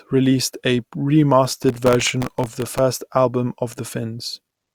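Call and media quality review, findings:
Processor overload crackle, 1.45–2.78 s. Gritty tearing over the speech. Audio processing repeatedly misses buffer deadlines; each miss replays stale audio with hard edges. About 70 misses, with buffers of roughly 0.7 ms. Stops once the load passes.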